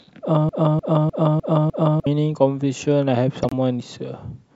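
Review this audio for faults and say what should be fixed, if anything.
From 0.49 to 2.06 s there's a broken-record loop: a 0.3 s fragment plays five times back to back, and whatever should have filled that stretch is gone. Likely a stalled player or stream resending its last buffer. An underrun watchdog that flushes instead of repeating would stop it.

At 3.43 to 3.53 s a corrupt frame gets decoded: damaged bits across a few frames throw energy into the wrong bands, giving a short chirp, squeak, blip or burst of noise. Checksum validation with concealment of bad frames would prevent this.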